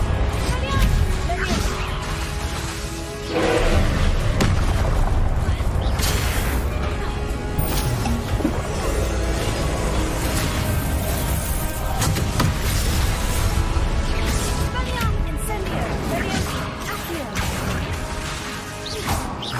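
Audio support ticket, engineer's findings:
No audible faults found on review; nothing to escalate.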